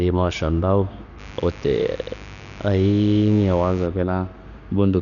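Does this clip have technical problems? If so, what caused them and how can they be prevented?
Yes. Dolby Digital compression, throughout: the speech is dull, with nothing above 7.1 kHz and rough, fluttering noise around tones, likely from AC-3 coding at a very low bitrate, around 48 kbps. Encode at a higher bitrate to prevent it.

Mains buzz, 1.16 to 3.89 s: switching spikes twice per 50 Hz cycle add a raspy harmonic buzz about 20 dB below the speech. Shielding cables and keeping dimmers and rectifiers off the audio supply prevents it.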